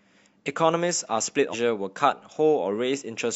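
A speech recording with a stream segment skipped at 1.49 to 1.54 s: the sound jumps abruptly ahead with a small blip, likely because one segment failed to load. Unlike a dropout, there is no silent gap; the audio resumes further along instead.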